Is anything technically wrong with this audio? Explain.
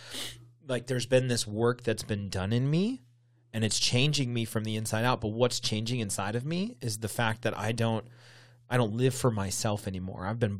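No, nothing technically wrong turns up in this speech recording.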